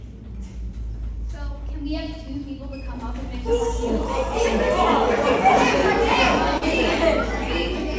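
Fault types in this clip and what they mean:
Short concealed packet loss: at 6.58 s about 40 ms never arrived and was patched by extending the preceding sound, seen as a brief smeared, unnaturally steady patch.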